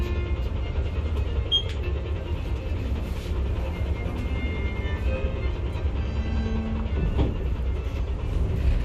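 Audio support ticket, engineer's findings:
Listened through the recording of sounds and found nothing of note; no issue to report.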